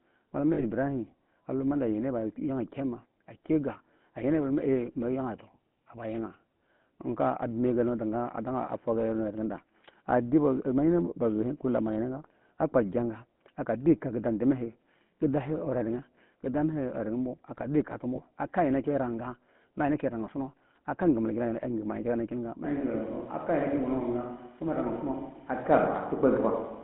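From the start, the speech carries the GSM full-rate codec's signature. The codec represents the vocal tract with a filter and excites it with a sparse, regularly spaced pulse train, and at a rate consistent with 13 kbps the damage is plainly audible as a buzzy, gravelly roughness. The band is confined to roughly 150 Hz to 3.4 kHz, so the sound is thin and telephone-like, with nothing above that upper edge.

At 0.54 s, lost GSM frames produce a dropout of about 40 ms, ending at 0.64 s, which fits two consecutive 20 ms frames going missing. The decoder conceals the gap by repeating the last good frame's parameters. That substitution sounds like a brief rough, metallic ring in place of the real signal. A second, shorter loss at 18.16 to 18.21 s, consistent with a single 20 ms frame, gives the same momentary ringing smear.

At 22.65 s the sound abruptly turns roomy and hollow, with less low end, and stays that way to the end of the clip. 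This fits a switch to a distant microphone, likely because the close microphone's feed dropped out and a farther pickup took over. The level barely changes, but room noise now sits roughly 35 dB below the speech. The onset is a hard cut, not a gradual transition.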